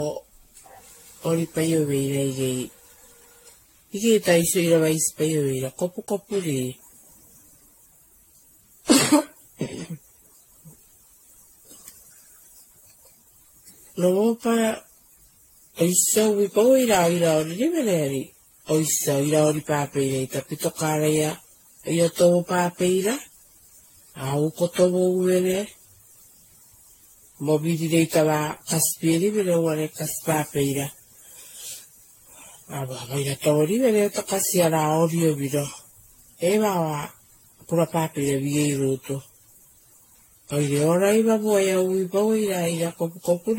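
Across the whole recording the speech carries generation loss, most likely from the audio being decoded and re-encoded around ten times with AAC-LC at a rate that sounds close to 64 kbit/s. Each pass requantises on a shifted frame grid, so coding noise and spectral holes stack up. The result is swirly, hollow and smeared beyond what a single encode would give, with consonant attacks softened and nothing present above 16.5 kHz.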